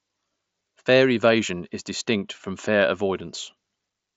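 No technical faults occur in this speech; it carries the normal limits of a Bluetooth mSBC headset link, with nothing above about 7.7 kHz.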